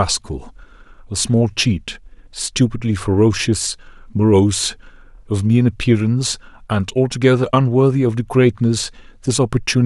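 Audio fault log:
Nothing stood out on listening to this speech recording.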